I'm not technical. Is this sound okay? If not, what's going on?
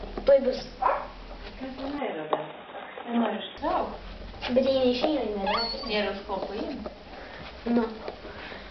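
No. From about 1.98 to 3.58 seconds the sound turns dull and boxy, as if heard through a cheap phone, then clears up again. Nothing above about 3.8 kHz gets through in that stretch, and a faint new background hiss comes with it. The loudness stays about the same and there is no gap at either change. This is most likely an input switched to a poorer device, a lower-quality microphone briefly taking over the recording.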